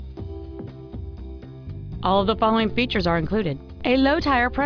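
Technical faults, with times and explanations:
No technical faults can be heard anywhere in the audio.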